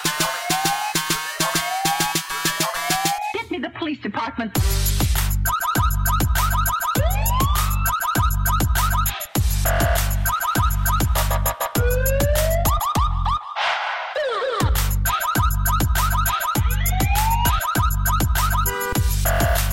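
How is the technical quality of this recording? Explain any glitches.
No glitches are audible anywhere in the recording, so there is nothing technical to explain.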